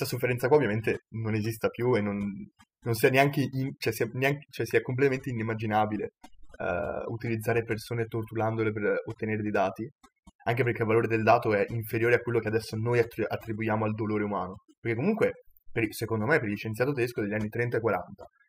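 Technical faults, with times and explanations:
Throughout, overdone noise removal: the background noise has been pushed down, leaving twinkling specks where isolated frequency bands flicker on and off between frames. The noise reduction was set so aggressively that any band close to its noise estimate gets cut hard, and the softer components of the speech fall below that threshold too.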